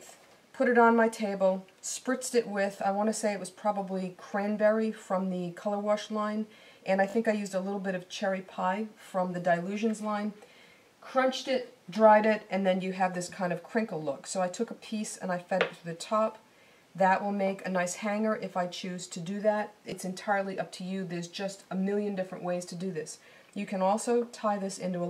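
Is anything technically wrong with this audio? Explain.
Yes, there are two repeated-buffer stutters. From 7.1 to 7.14 s one 20 ms slice plays twice more, then from 19.9 to 19.92 s once more, losing roughly 40 ms and 20 ms. The player looped its last buffer while waiting for late data, giving a brief buzzy repeated hit with hard joins. A dropout would leave a gap of silence instead.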